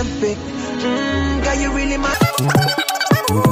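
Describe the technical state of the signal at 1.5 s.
At 1.5 s the signal is intact, with no dropout, distortion or other technical fault to be heard.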